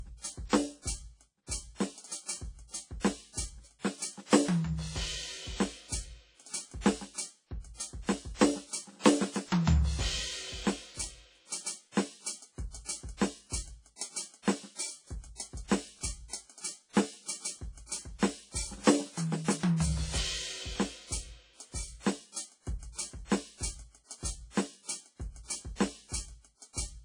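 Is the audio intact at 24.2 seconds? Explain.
No. A block of digital silence at 24.25 s drops the music for 2 ms, either because the output buffer went unfilled in time or a calculation produced invalid numbers; so short a gap is heard as a tick or dip rather than silence.

The passage also carries plainly audible codec damage, likely from WMA compression at a rate that fits 32 kbps. Nothing is present above 10.1 kHz, and quantisation noise smears and washes across the sound.

Sample clock jitter of around a microsecond adds a roughness roughly 35 dB below the music, growing with loud and high-pitched content.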